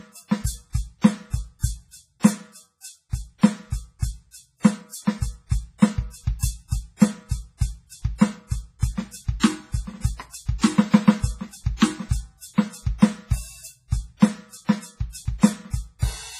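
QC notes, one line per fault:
Throughout – WMA compression: the music sounds ringing and washy, with hiss breathing alongside it and nothing above 15.1 kHz, likely from a low-bitrate WMA 1 encode near 24 kbps, whose long blocks smear quantisation noise and drop weak components.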